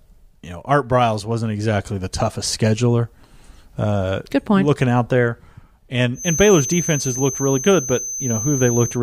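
From 6.13 s to the end of the speech clip, a feedback whistle sits behind the sound. It is a steady tone at 6.2 kHz, around ten decibels below the speech. It swells and fades slowly in level but never grows into a howl. The likely cause is a loudspeaker-to-microphone loop held just short of runaway feedback. That lets this one high frequency keep ringing on its own at a low level.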